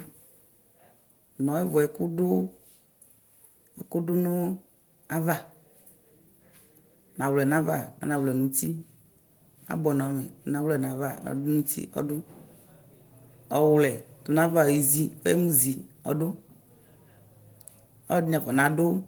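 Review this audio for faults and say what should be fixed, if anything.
Nothing needs fixing: the speech keeps its full bandwidth up to about 20.1 kHz, and the light coding texture that can be heard fits Opus voice compression running in its hybrid mode as intended.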